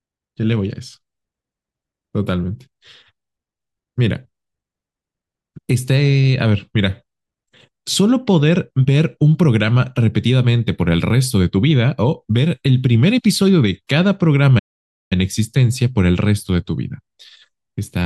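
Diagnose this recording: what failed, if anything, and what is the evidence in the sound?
A playback stall interrupts the speech at 14.58 s: the output drops to silence mid-flow and stays silent for about 0.52 s, resuming at 15.13 s. The gap is silence rather than a fade or dropout noise, and the sound picks up again after it. The stage is playback, and the likely cause is the player running short of buffered data or its output thread being blocked, leaving the device nothing to render until it recovered.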